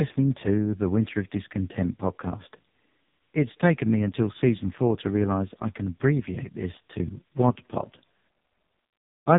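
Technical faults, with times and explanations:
Throughout, AMR narrowband mobile codec: nothing above 3.8 kHz survives, a hard spectrogram ceiling; heavy buzzy, synthetic speech fits the lowest 4.75 kbps mode.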